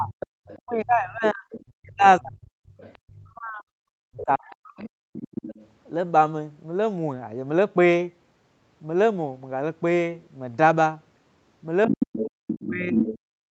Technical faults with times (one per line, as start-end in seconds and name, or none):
0.00-2.55 speech suppressed in double talk
0.11-0.59 other side's voice leaking through
1.24-1.65 other side's voice leaking through
2.71-3.14 other side's voice leaking through
3.21-4.92 speech suppressed in double talk
4.18-5.68 other side's voice leaking through
11.83-13.19 other side's voice leaking through
11.87-13.51 speech suppressed in double talk